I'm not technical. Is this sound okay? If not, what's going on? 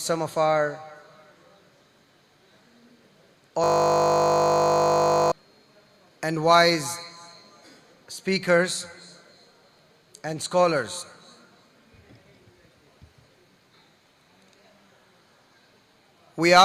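No. From about 3.64 to 5.32 seconds there is a system hang loop. The computer briefly froze while the sound hardware kept replaying the last 20 milliseconds of audio, over and over. Because that snippet is so short, the repeats blur into a steady 50 Hz buzz rather than a stutter. Unlike a simple dropout, the sound doesn't go silent. It locks onto one tiny moment and drones until the system recovers.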